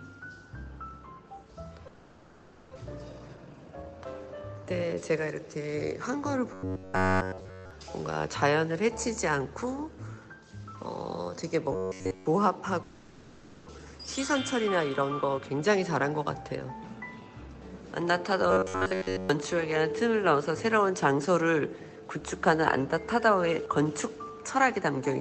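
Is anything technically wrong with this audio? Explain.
Yes, there are three kinds of fault.

From 1.87 to 2.77 s and again from 12.83 to 13.71 s, the sound dissolves into a fading buzz or hiss before resuming further on. This is a long network dropout, likely from about 0.6 s of audio never arriving, with the gap concealed for nearly 0.9 s each time.

Right after each gap, from 2.84 to 4.35 s and from 13.78 to 16.11 s, the audio sounds hurried but keeps its pitch. It runs at 116% and then 110% speed. This is a jitter buffer speed-up: tiny pitch-period slices are removed to shed the built-up delay, roughly 0.3 s and 0.2 s.

From 6.54 to 7.71 s and from 11.73 to 12.26 s, the audio turns into a rigid metallic buzz at 93.8 Hz. From 18.51 to 19.29 s the same buzz appears more partially. This is robotic sound from repeated short buffers, likely a roughly 11 ms chunk looped while real audio was skipped.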